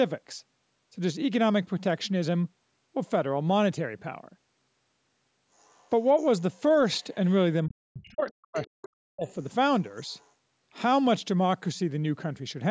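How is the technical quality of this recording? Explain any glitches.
The recording has two echo-related problems from a call path.

The other side's voice leaks through at 5.58 to 5.89 s, 7.0 s, 8.27 s, 8.54 to 8.68 s, 9.23 to 9.33 s and 10.09 to 10.3 s. The echo canceller likely left part of the loudspeaker signal in the microphone, so faint scraps of another voice, roughly 25 to 40 dB under the speech, surface briefly.

Speech is suppressed in double talk from 7.66 to 9.26 s, likely because both sides spoke at once and the canceller turned everything down. For about one and a half seconds the talker's voice dips deeply. The call processing leaves nothing above about 8 kHz, which is normal.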